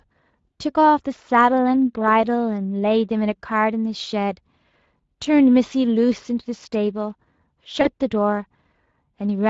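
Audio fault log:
Throughout, Speex codec: plainly audible coding damage, with speech sounding hoarse and grainy, which fits a rate around 20 kbps leaving the excitation short of bits.
7.81 to 7.91 s, VoIP packet loss concealed by the speech codec: about 40 ms of audio dropped out, so the decoder stretched the last sound into a fading buzzy tone or coloured noise, and the voice stays weak briefly afterwards.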